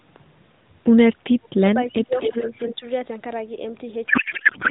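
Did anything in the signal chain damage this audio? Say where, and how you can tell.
Yes, in four places, all in call processing or the codec path.

Between 1.86 and 2.58 s, and again from 2.75 to 2.85 s, the speech dips by about 15 dB and then about 10 dB, for around 0.6 s in total. This is likely speech suppressed in double talk: the echo canceller, unable to separate near talk from far-end echo, attenuated both.

From 2.2 to 2.75 s a fainter copy of the speech trails the original by 264 ms, about 10 dB below it. The fixed delay points to an echo leak, likely a loudspeaker path the echo canceller did not fully cancel before sending it back.

From 4.08 s to the end, the speech turns into garbled noise and warble that barely tracks it. This is a codec payload misread: octet-aligned AMR frames decoded as bandwidth-efficient, so every field is read from the wrong bit positions. The 12.2 kbps AMR-NB coding before that point shows only light coding damage.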